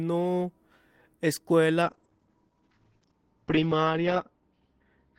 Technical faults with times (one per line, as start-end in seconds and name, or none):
1.82-5.19 call bitrate drop